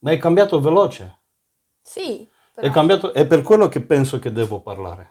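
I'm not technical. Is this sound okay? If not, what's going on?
Yes, nothing wrong can be heard in this recording.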